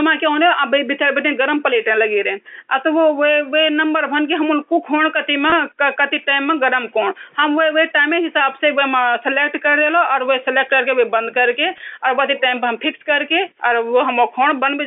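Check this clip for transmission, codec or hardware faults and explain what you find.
Two brief packet losses with pitch repetition turn up, at 5.50 to 5.52 s and 11.78 to 11.80 s. Each gap is about 20 ms, which fits two 10 ms packets going missing. The receiver covers each hole by looping the last pitch cycle, so you get a tiny held, buzzy smear. The G.711 telephone band underneath comes through as expected.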